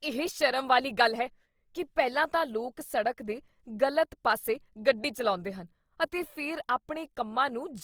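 Grainy, rough texture throughout the speech is likely Opus compression near 24 kbps. Unlike MP3, it swirls less: bands stay noise-filled, and content reaches 20.3 kHz.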